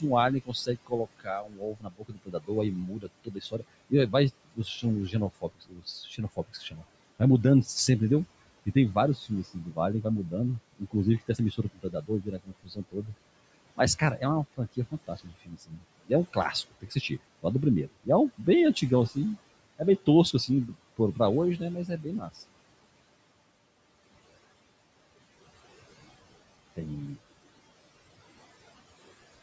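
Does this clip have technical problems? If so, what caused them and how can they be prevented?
Yes. Throughout the speech, a noise suppressor pulls down the room noise, which sits about 19 dB below the voice, by about 20 dB, frame by frame, across every band it judges to be steady. The leftover background sinks in pauses and swells under the voice. Gentler suppression, or a quieter room so less reduction is needed, would prevent this.

The suppressor also mistook parts of the speech for noise in four stretches: 0.00 to 7.68 s, 8.66 to 13.11 s, 13.76 to 19.17 s and 19.78 to 22.36 s. The dips reach about 22, 21, 20 and 18 dB respectively. In total, roughly three seconds, one and a half seconds, one second and under half a second of speech sound swallowed or faint. Moving closer to the microphone or lowering the suppressor's aggressiveness would prevent this speech cut by the noise suppressor.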